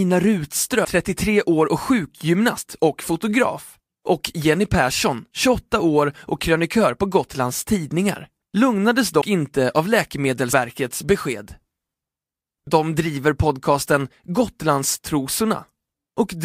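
Compressed frames, missing or rejected by the decoder, were skipped at 0.84, 9.20 (before "inte av") and 10.52 s, so speech jumps ahead about 300, 100 and 150 ms.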